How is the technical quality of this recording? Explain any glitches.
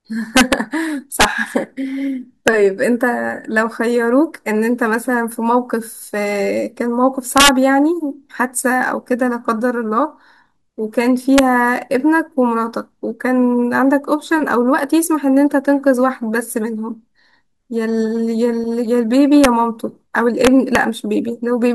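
The recording is marred by repeated integer overflow on loud speech peaks. It occurs at 0.37–0.53 s, 1.21–1.25 s, 2.48 s, 7.38–7.49 s, 11.38 s, 19.44 s and 20.45–20.75 s, with peaks pushed up to about 4 dB past full scale. Instead of being limited, each sample above the ceiling wraps around to the opposite extreme of the integer range, so the waveform jumps from full positive to full negative. Each event is heard as a harsh, violent crack, far sharper than ordinary clipping.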